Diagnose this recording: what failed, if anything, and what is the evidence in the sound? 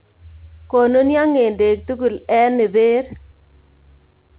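Nothing failed: the speech comes through the call path intact, with the band stopping at 4 kHz as expected of a narrowband telephone link, which fits G.711 mu-law at 64 kbps.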